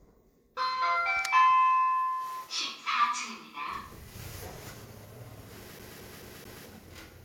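From 5.79 s to 6.66 s the sound gets caught in a CD stuck on one turn. A scratch on the disc keeps sending the laser back one track at the same point of each rotation. So a slice of about 218 ms plays four times in a row. Each jump back leaves a short mute. The result is a quick, evenly spaced stutter. It is the familiar sound of a skipping CD.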